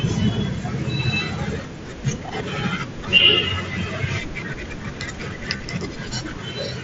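At 5.57 to 5.60 s there's concealed Bluetooth headset packet loss. About 30 ms went missing between headset and phone, which fits a short run of lost packets. The receiver filled the gap by repeating a best-matching recent stretch, so the speech turns briefly into a buzzy held tone at full level before a small warble as the real signal comes back, all through the light grain of the mSBC codec.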